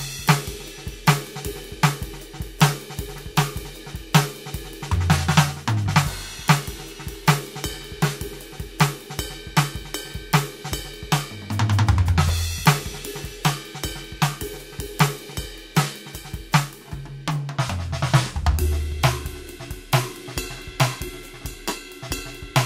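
A section at the wrong speed runs from 0.0 to 17.58 s in this music clip, playing at 1.14 times the original rate, so tempo and pitch rise together by roughly two semitones, likely from the passage being fitted to the wrong clock before returning to normal speed.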